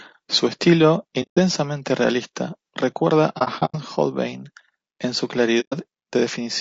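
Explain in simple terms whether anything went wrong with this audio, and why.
The speech has a rough, grainy texture throughout, with an artificial edge up top. That's the sound of low-delay AAC compression, likely the AAC-ELD kind used for video calls, squeezed hard enough that its short frames can't capture the voice cleanly.

There's also AAC frame loss with muting. The sound softly fades into silence three times: 1.22 to 1.38 s, just before "realista recuerda"; 3.38 to 3.75 s, right after it, in broken patches up to about a tenth of a second; and 5.60 to 5.74 s, after "en su". Those chunks of audio simply went missing.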